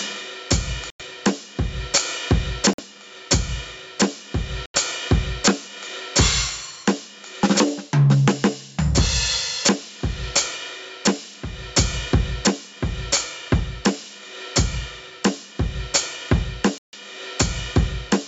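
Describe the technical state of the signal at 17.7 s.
At 17.7 s you're still in the gain pumping that runs through the whole music clip. The level looks like it's likely being pushed too hot and then yanked down by a fast limiter, so loud and soft parts end up closer in level and the sound is squashed, with the gain swinging around 25 dB. The call's microphone processing leaves nothing above 8 kHz.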